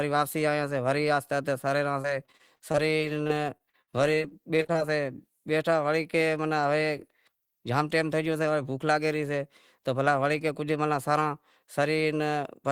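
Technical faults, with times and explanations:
2.01–4.76 s, repeated packet loss (robotic sound): across this stretch the speech breaks up about 20 times, with gaps up to 58 ms long and roughly half a second of audio lost in total. Each hole is filled by extending the last received sound, so about 17% of the span is patched material, giving a choppy, robotic texture. Unlike a single dropout, the holes keep recurring, one soon after another.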